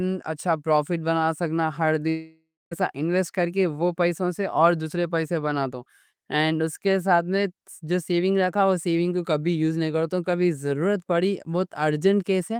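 From 2.09 to 2.73 s, after "سکنا ہر", the speech becomes a fading buzz, then silence, resuming at "انویسٹ کر کے وہ". This is likely a long network dropout.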